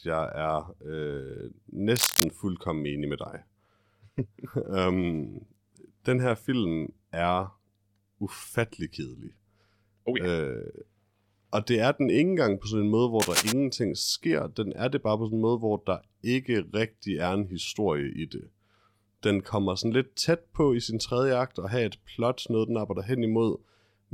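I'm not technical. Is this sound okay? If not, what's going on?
No, not quite. There are two short bursts of cable scratch noise, a rough scratching or crackling over the speech from 1.96 to 2.26 s and again from 13.20 to 13.53 s. The first is a bit louder than the voice and the second about as loud. The likely cause is a worn cable or plug being nudged, so its electrical contact flickers and sprays noise into the recording for a moment.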